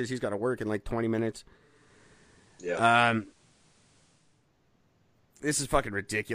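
After "in like twenty minutes", from 1.55 to 4.50 s, digital radio blending to analogue FM brings faint hiss and a level shift of about 2 dB.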